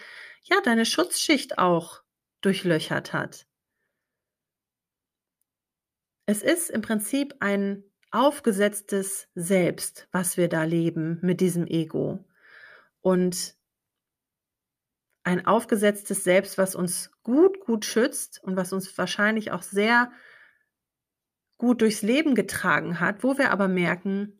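No technical faults can be heard anywhere in this speech recording.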